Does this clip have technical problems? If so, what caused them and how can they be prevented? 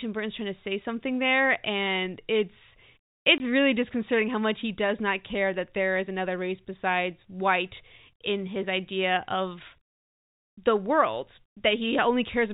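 Yes, there's one dropout: packet loss filled with silence from 3.38 to 3.40 s, right before "really disconcerting how much". For 20 ms the audio simply cuts to dead silence, with hard edges on both sides. The gap fits a single lost 20 ms packet, with the receiver playing nothing in its place. The G.711 telephone coding is carrying the speech band-limited below 4 kHz as expected. To prevent it, enable packet loss concealment and a jitter buffer, or add forward error correction on lossy links.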